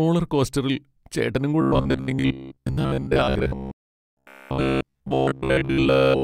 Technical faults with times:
1.61-6.23 robotic sound from repeated short buffers

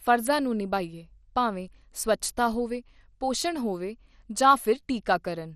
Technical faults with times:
0.00-5.55 MP2 compression

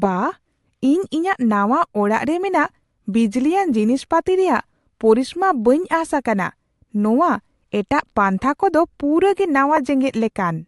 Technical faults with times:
0.00-10.67 Bluetooth LC3 compression
9.77 lost LE Audio frames

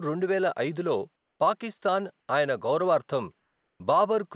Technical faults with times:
1.16-1.40 comfort noise in place of the background
3.40-3.80 comfort noise in place of the background

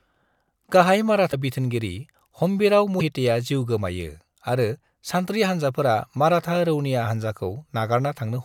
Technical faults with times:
1.31-1.34 broken MP3 bit reservoir
2.99-3.02 broken MP3 bit reservoir

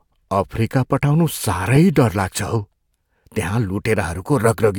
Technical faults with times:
1.75-1.77 corrupt frame decoded

